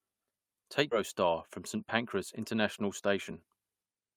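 At 0.91 s a skip ahead occurs: roughly a fifth of a second of speech was dropped while later audio waited, so playback jumps forward with no gap. From 2.87 to 3.69 s a jitter buffer speed-up trims about 70 ms of pitch periods, so speech runs 108% fast, hurried but unchanged in pitch.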